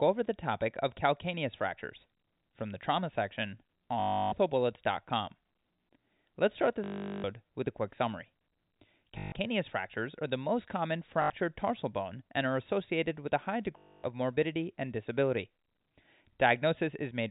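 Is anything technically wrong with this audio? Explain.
Yes, there's packet loss with last packet repeated, at 4.0–4.32 s right after "from the trauma section", 6.84–7.24 s, 9.18–9.32 s just before "fractures are the most", 11.22–11.3 s, and 13.78–14.04 s between "associated with a high" and "morbidity and disability". Lost packets get replaced by replaying the last good one, so you hear a robotic stutter that buzzes at about 50 Hz, which fits 20 ms packets. The gaps run from 80 ms to 400 ms, all over a telephone-band G.711 signal that stops at 4 kHz.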